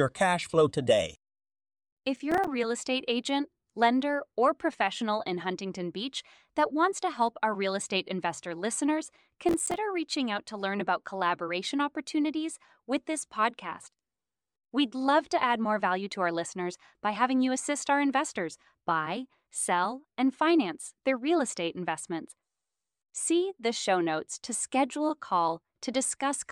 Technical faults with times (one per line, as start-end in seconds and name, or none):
2.16-2.47 processor overload crackle
9.49-9.77 processor overload crackle